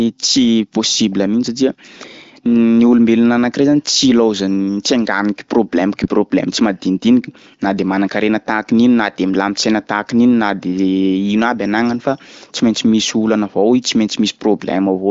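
Nothing stood out on listening to this speech, which is carried by the AMR wideband (HD Voice) codec at what sounds like one of its higher rates, with its content stopping near 7.5 kHz.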